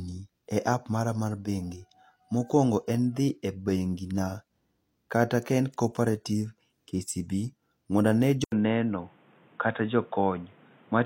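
At 8.44 s the speech drops out for about 80 ms, and when it comes back it sounds dull and boxy through to the end. The input has most likely switched to a poorer device, say a headset in its call profile. Nothing comes through above 3.8 kHz, so the top end that carries crispness is gone. A new background noise sits roughly 30 dB under the speech, and the loudness stays about the same across the switch.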